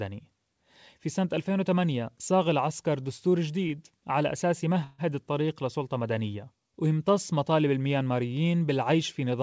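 A speech recording carried over a call link, where nothing above 8 kHz reaches the listener, consistent with a G.722 wideband codec. At 3.68 to 3.73 s a packet arrived late and the jitter buffer ran dry, so the receiver held the last sound for about 19 ms before resuming at the same point. This short stall from a late packet sounds like a briefly stretched sound with a slight buzz or dip, and nothing is lost. From 4.84 to 5.01 s there is a call audio freeze, likely from packets held up in transit. The receiver filled about 146 ms with a fading continuation of the last sound rather than silence, and then the speech picked up where it stopped, leaving an inserted pause.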